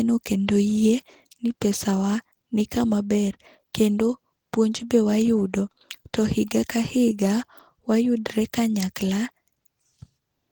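From start to finish the speech has a muffled, hoarse, grainy texture, likely Opus compression running at a low bitrate, around 16 kbps. At rates that low the encoder falls back on its speech-oriented hybrid mode and fills thin bands with noise, so the damage is plainly audible even with content reaching about 20 kHz.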